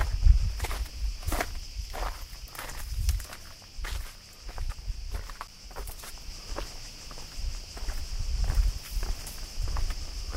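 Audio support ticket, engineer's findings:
Block of digital silence at 5.47 s, 9 ms long. Heard as a single tick in the sound. Probable component: output buffer not filled in time. Samples drop hard to silence and resume with no fade. Waveform: flat near-silent line between two vertical edges. Spectrogram: thin full-height blank column.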